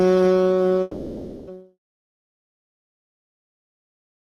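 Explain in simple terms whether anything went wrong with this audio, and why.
Something did go wrong, twice. From 0.81 to 1.51 s the music drops out, most likely a long network dropout: the receiver stretches the last bit of sound into a fading buzz, and when the music returns, roughly 0.6 seconds of it is simply gone.

Then from 2.09 to 2.53 s there's a jitter buffer speed-up. Audio had piled up, as happens when delayed packets arrive together, so the receiver snipped out tiny slices to catch up. The music plays about 12% faster at the same pitch, and the beat feels rushed.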